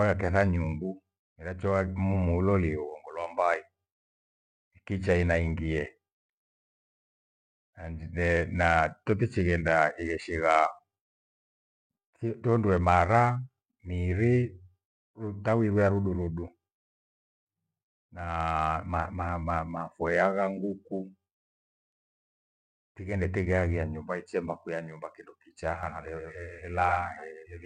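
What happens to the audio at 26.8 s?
A slower capture path or an out-of-step edit is likely mixing the speech in twice. This doubled audio track runs from 25.83 s to the end. The copy trails by about a tenth of a second, roughly 5 dB quieter, and cuts in abruptly as a dry slapback with no decay.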